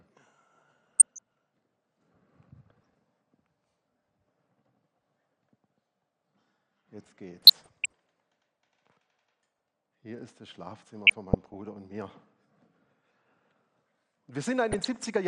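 Weak DAB reception lets bit errors slip past error correction into the MP2 audio data. Corrupted samples put short blips of noise in single sub-bands and corrupted scale factors make sub-bands jump in level, producing DAB burbling at 0.99–1.19 s, 2.70 s, 7.38–7.93 s, 9.39–9.65 s, 11.07–11.54 s and 14.72–15.07 s.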